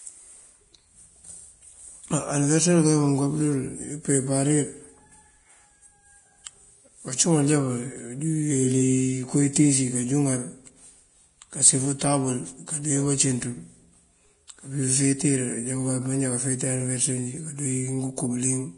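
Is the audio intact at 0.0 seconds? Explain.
No, Vorbis compression damage is present at 0.0 seconds and runs through the whole clip. The likely cause is heavy low-bitrate Vorbis encoding, consistent with roughly 31 kbps. The encoder keeps a smooth spectral outline of the speech and spends too few bits on the detail above it. Treble is removed above 10.6 kHz, and what remains of the fine high-frequency structure turns into grainy hiss, leaving tones rough and consonant onsets smeared.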